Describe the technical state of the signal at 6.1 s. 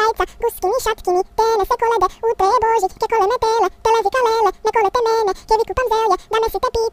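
At 6.1 s the audio is affected by a fault that runs through the whole clip: it is read two samples at a time, so it plays at double speed. The reader treats each pair of samples as a single frame, as if the stream had two channels or samples twice as wide. The result is 2x playback with pitch raised by 12 semitones, a full octave.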